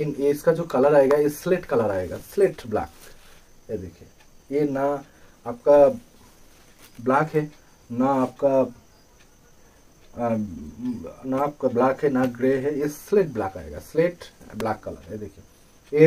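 At 1.11 s a sharp snap sits on top of the sound, and a second, matching snap follows at 14.60 s; both peak somewhere around -10 dBFS. These are electrical switching spikes, most likely a nearby switch, relay or motor arcing and coupling a brief burst into the audio line. Each lands as a tight, dry click laid over the sound rather than replacing it.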